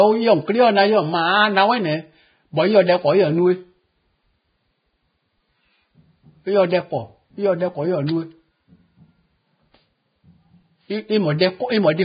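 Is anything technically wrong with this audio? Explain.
Yes. Throughout the speech there is heavy damage consistent with Vorbis compression, likely at a very low bitrate around 15 kbps. Nothing is present above 4.9 kHz. The encoder quantises the remaining treble so coarsely that detail turns to noise. It sounds dull, hissy and grainy, with roughened tones and blurred attacks.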